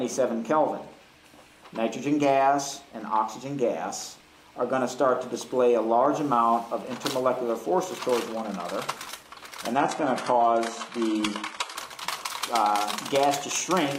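From 9.76 to 11.76 s the stream drops to a lower bitrate: a slowed connection forces a leaner encoding, which fits HE-AAC near 16 kbit/s. Codec artefacts rise and nothing remains above 11.8 kHz. Unlike a dropout, the quality switches abruptly with no gap.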